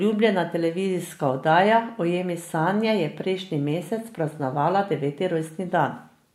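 Nothing stood out on listening to this speech recording.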